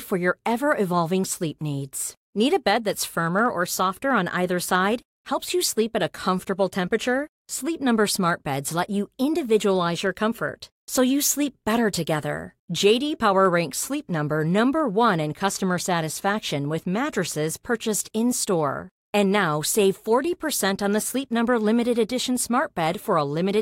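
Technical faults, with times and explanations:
Throughout, block size mismatch (truncated): a steady buzz at 43.1 Hz runs under the speech, and its rate fits 1024-sample blocks at a 44.1 kHz rate. One stage delivers blocks longer than the next stage takes in, so the tail of each block is dropped and a small discontinuity recurs at every block boundary. The speech plays at normal speed and pitch, so only a very small part of each block is being lost.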